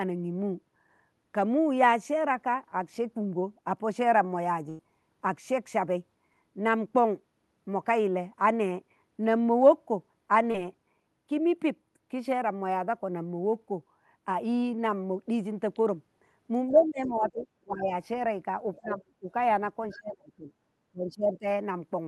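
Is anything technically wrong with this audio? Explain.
Yes, there are packet-loss and echo-control faults.

At 4.69 to 4.80 s, a burst of packet loss removes about 100 ms of speech. The receiver extends the last sound and fades it, giving a held buzz or fading hiss before the speech resumes with the middle missing.

At 10.51 to 10.55 s, a short concealed packet loss drops about 30 ms. Concealment synthesises a continuation and blends back, heard as a brief smear.

Speech is suppressed in double talk at 16.71 to 17.47 s, 17.64 to 17.90 s, 18.79 to 19.29 s, 19.93 to 20.53 s and 20.92 to 21.46 s. The level dips by about 15 to 30 dB, deepest in the stretch from 19.93 to 20.53 s. The likely cause is an echo canceller attenuating during simultaneous talk.

The other side's voice leaks through at 17.05 to 17.31 s (about 20 dB below the speech), 18.77 to 18.98 s (about 15 dB below) and 19.90 to 19.97 s (about 25 dB below). 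It is audible as faint fragments, likely residual loudspeaker echo.

The call path's audio tops out near 12 kHz, consistent with an Opus call codec.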